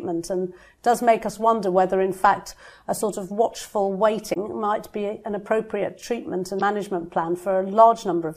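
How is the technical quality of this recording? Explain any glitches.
Two short glitches come from damaged data in a compressed stream, at 4.33 to 4.37 s and again at 6.57 to 6.61 s, each lasting about 40 ms. In both spots the bytes carrying the encoded audio were corrupted, so the decoder misread those frames, lost its place in the stream, and had to hunt for the next valid frame header before playback recovered. Each one comes through as a brief glitch that breaks into the sound for a moment.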